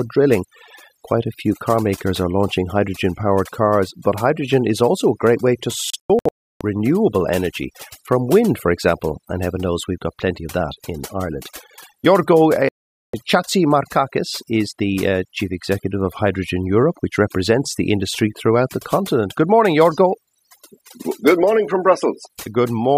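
A speech recording carries overdone noise removal from start to finish: the background is pushed down with twinkling specks left behind. On a spectrogram this shows as isolated bright dots in an otherwise black floor, with gaps torn out of the fainter harmonics. There are two digital broadcast dropouts where the receiver muted until clean frames returned. The first falls between 5.90 and 6.61 s, after "a great way to" and before "renewable energy from wind". It is several holes totalling 512 ms, the longest 320 ms, which fits lost frames of about 32 ms each. The second falls between 12.69 and 13.14 s, with 448 ms missing. In the waveform both appear as flat silent stretches, and as blank vertical bands on a spectrogram.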